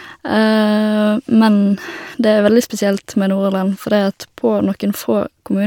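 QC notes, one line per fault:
No faults found in this speech recording; nothing to log.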